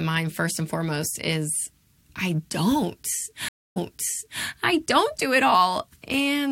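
Speech clip with a stream reconnect at about 3.49 s: the audio drops out for roughly 0.27 s, then comes back about 0.67 s earlier than where it stopped, so you hear a short stretch repeated. That's the server resending a burst to a fresh decoder, settling by 4.43 s.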